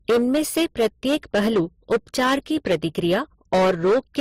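A short speech recording suffers hard clipping from start to finish. The level is driven roughly 11 dB past what the signal path can carry, so about a tenth of all samples are cut flat at the clipping limit. Every loud syllable comes out as harsh fuzz rather than occasional crackle. On a waveform the peaks are sliced into flat plateaus. A spectrogram shows smeared harmonic energy climbing far above the voice on each stressed sound. Layered over that is a mix of compression artefacts from different codecs heard together, plus a brick-wall absence of anything above 15.8 kHz. This blend of distinct codec signatures most likely comes from transcoding between lossy codecs, with the sound pointing to an MP3 encode at around 45 kbit/s later re-encoded as Opus at about 32 kbit/s. On a spectrogram it appears as a hard horizontal edge at 15.8 kHz and blotchy, time-smeared patches in the upper bands.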